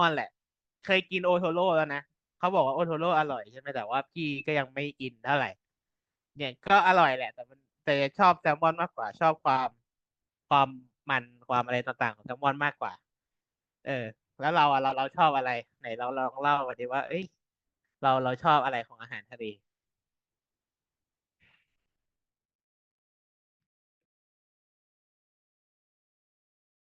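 At 14.89 to 14.94 s and 16.71 to 16.74 s, a corrupt frame was decoded: damaged bits in about two compressed frames each were played anyway, misplacing energy in frequency. The first is a glitch near -20 dBFS, the second a fainter glitch near -35 dBFS, before the intended fade-out ending at 26.9 s.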